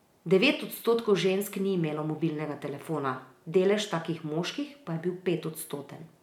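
Speech with no audible faults.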